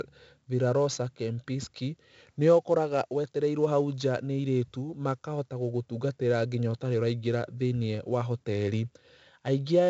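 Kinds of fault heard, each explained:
4-bit ADPCM compression, throughout: every sample is coded as a coarse 4-bit step from a predicted value, with the step size adapting as the speech goes on. The result is a gritty hiss that rides on each loud syllable and rises and falls with the voice, plus roughness on sharp onsets where the step size lags behind. The damage is heavy, and nothing sounds above about 7.8 kHz, which fits a 64 kbps stream at a 16 kHz sample rate and leaves the top dull.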